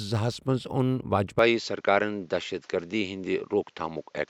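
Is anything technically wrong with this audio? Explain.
Yes. From 1.39 s to the end, the speech loses everything above 7.6 kHz and gains a faint new background hiss, while its level stays about the same with no gap at the change. This is likely an input switched to a poorer device, whose narrower band and own noise floor replace the original microphone's. The new hiss marks a different device rather than a filter on the same signal.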